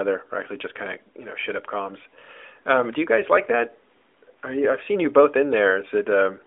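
No faults detected.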